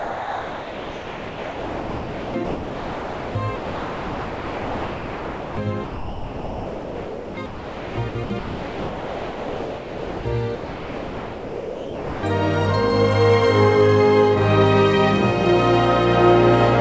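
The audio comes through a call path that carries nothing above 8 kHz, which fits the G.722 wideband codec. From 0.0 to 5.57 s and again from 5.84 to 10.25 s the sound keeps breaking into holes filled with synthetic background, about 5.3 s and 4.0 s in total, likely sound chopped by the voice detector. From 10.55 to 12.23 s the sound gives way entirely to about 1.7 s of steady comfort noise, likely sound dropped by the voice detector.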